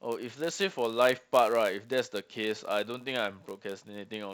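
From start to finish the speech carries a steady buzz at about 91.5 Hz, which is the telltale of a block size mismatch, padded. One stage is handing over blocks a touch shorter than the next stage expects, so every block gets a tiny run of zeros tacked on. Those regular gaps make the buzz. Because the size difference is small, the speech only runs at 0.996 times normal speed, with the pitch essentially where it should be.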